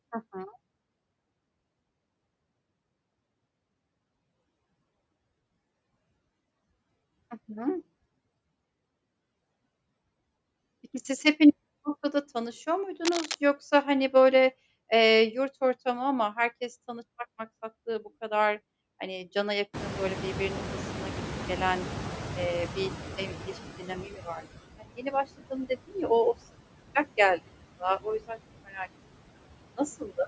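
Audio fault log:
Throughout: noise suppressor artifacts. Steady background noise is pulled down by about 20 dB, band by band and frame by frame. It sinks in the pauses and swells back under the speech.
13.05–13.35 s: cable scratch noise. A rough, rustling burst lasting 0.3 s sits between "hepiniz bu noktada tanışıyor" and "yoksa hani böyle eee". It is nearly as loud as the speech. It most likely comes from a worn cable or connector being moved, with its contact resistance jumping rapidly.
19.73–24.40 s: noise suppressor catching up. Just after "bu kadar hani cana", the room noise jumps by about 25 dB. The suppressor's noise estimate lags, so the louder noise first comes through poorly reduced. Over 4.67 s it settles to about 16 dB of reduction.
23.79 s, 24.05 s, 24.78 s, 25.37 s, 28.65 s and 29.99 s: speech cut by the noise suppressor. In each case the suppressor mistakes part of the speech for noise and turns it down. 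The dips last 0.1 to 0.3 s, ranging from about 7 dB to about 20 dB. The worst come at 24.78 s and 25.37 s, and another follows "yüzden çok". The affected speech sounds swallowed and faint.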